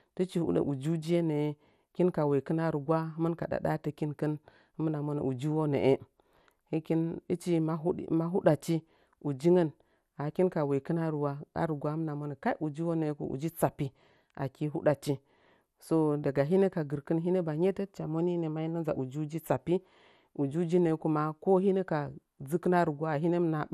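Throughout, the speech sounds dull and gurgly, with nothing above 15 kHz. Bit-starved upper bands drop out. This is likely MP2 compression at around 80 kbps.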